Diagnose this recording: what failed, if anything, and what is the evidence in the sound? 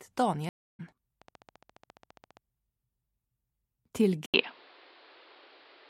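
Three separate failures can be heard, at the network, the analogue or interface stage, and the input device.

Stream reconnect, network stage: at 0.49 s the audio drops out for 300 ms until 0.80 s, and when it returns it has skipped ahead by roughly a third of a second. The player lost its connection, went silent, then reconnected and restarted decoding at the live edge. On the waveform this is a flat gap. The spectrogram shows a blank vertical band.

Train of clicks, likely from interference or a struggling interface in the analogue wiring or converter path: from 1.22 s to 2.38 s there is a steady ticking at 14.7 clicks per second, around twenty in total, with peaks roughly as loud as the sound itself. The waveform shows evenly spaced, near-identical spikes. On the spectrogram they appear as a comb of thin full-height vertical lines.

Input switched to a poorer device, likely a fallback to another microphone or a headset call profile: at 4.26 s there is an 80 ms gap, after which the sound runs to the end dull and band-limited, with nothing above 5.3 kHz. 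A new noise floor appears roughly 30 dB below the signal, and the level shifts by about 5 dB. The spectrogram shows a hard ceiling at 5.3 kHz after the gap, and the waveform shows a step in level.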